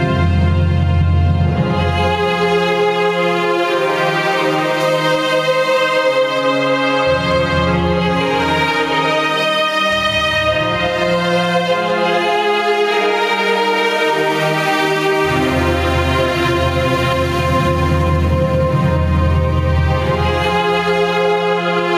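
Gain pumping runs through the whole recording. The level swings by something like 10 dB. Loud and quiet passages sit unnaturally close together, and the sound feels squashed. The likely cause is input gain set far too high, with a fast limiter or compressor clamping down on each peak.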